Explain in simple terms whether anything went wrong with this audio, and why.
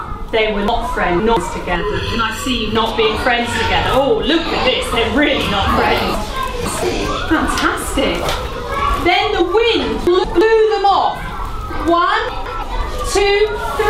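Two things go wrong. The first is chunks out of order. The audio travels in small pieces of about 0.17 s each. At 0.68 to 1.37 s and 6.14 to 6.83 s, one piece plays three pieces too late. At 10.07 to 10.41 s and 12.29 to 12.63 s, one plays a single piece late. Each spot sounds jumbled.

The second is channel delay, which causes comb filtering. From 1.76 to 2.76 s, one side of the sound runs slightly behind the other, by just under a thousandth of a second. When the two sides mix, some tones cancel. The sound turns hollow and phasey, with a gap at roughly 700 Hz.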